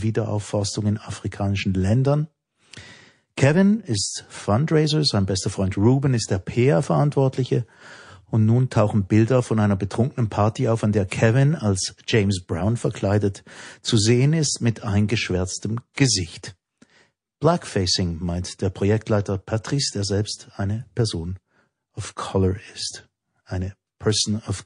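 Watery, swirly treble loss and smeared attacks run throughout the speech, likely MP3 compression at a low bitrate near 40 kbps, zeroing weak frequency lines frame to frame. Pre-echo at 11.08 to 11.11 s and 15.93 to 15.97 s: quantisation noise spreads about 31 ms ahead of sharp attacks, heard as hiss rising about 17 dB, then about 26 dB.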